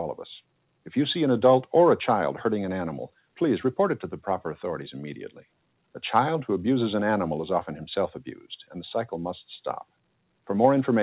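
At 5.29–5.46 s and 8.35–8.75 s, sound is cut by the noise suppressor, which mistakes it for noise. The level dips by about 11 dB, then about 20 dB, showing as waveform notches and faded spectrogram bands, all below the 4 kHz ceiling.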